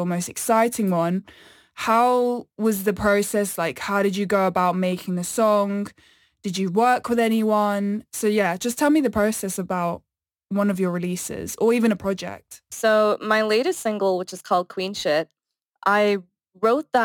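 Throughout the clip, crude rate conversion adds a gritty, inharmonic fizz riding on loud and bright speech, roughly 25 dB below it. Samples were simply dropped, fitting a 48 kHz to 44.1 kHz change, so the error repeats rhythmically, unlike steady hiss or quantisation noise.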